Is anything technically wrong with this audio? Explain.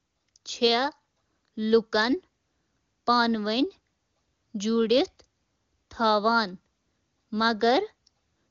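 No, nothing stood out as technically wrong on listening to this speech clip.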